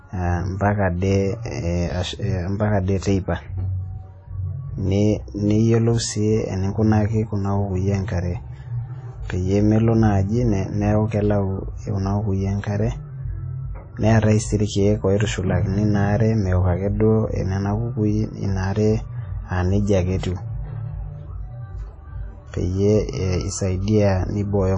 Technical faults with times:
0.00-24.77 WMA compression

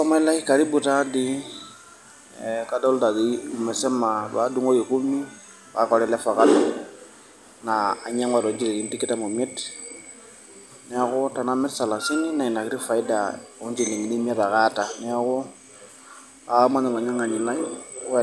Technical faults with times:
none

